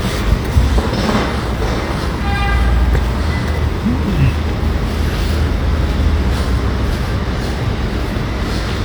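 No faults detected anywhere in this recording of sounds.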